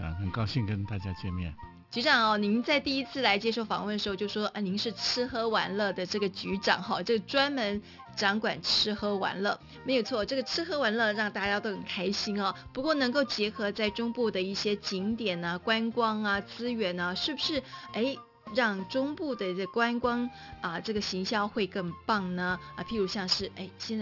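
Aliasing runs throughout: content above 6 kHz folds back as gritty, metallic tones, which fits an unfiltered drop to a 12 kHz rate, unlike a clean, dull band limit.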